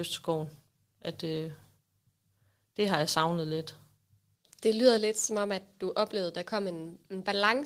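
At 4.98 s the microphone volume is stepped down. Voice and background fall together by about 3 dB, all at once, just before "lidt som om at". The likely cause is call software judging the input too loud and cutting the device's input volume in a single step.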